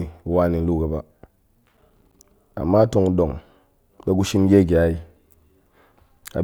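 From 1.64 to 2.24 s the speech picks up a gritty burst of processor overload crackle. The processor is missing its deadlines on small buffers, roughly 5 ms each, about fifteen of them. Each miss drops a hard-edged gap of silence, and the whole thing clears once the load eases.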